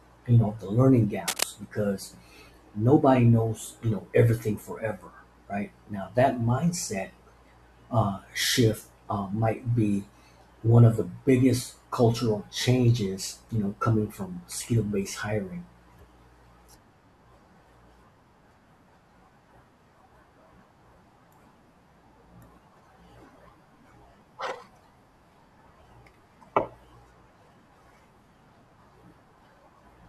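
A worn cable or connector was likely disturbed from 1.26 to 1.44 s, just after "you know the learning", its contact resistance jumping erratically. The result is cable scratch noise, a dense, ragged burst of scratching only a little quieter than the speech.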